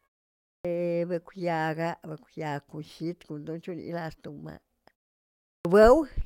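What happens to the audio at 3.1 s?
Nothing goes wrong at 3.1 s: the speech is intact there.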